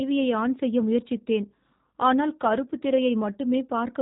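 Throughout the speech, G.729 codec damage is plainly audible. Nothing passes above 3.8 kHz, and the sound is rebuilt from a vocal tract model and a few pulses per frame, which fits an 8 kbit/s coder. That rough, synthetic texture sets it apart from simple band-limiting.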